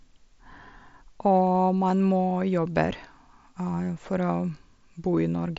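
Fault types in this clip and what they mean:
No faults can be heard in the clip. The speech comes through a Bluetooth mSBC headset link: the audio stops at about 7.7 kHz and carries the light grain of that wideband codec.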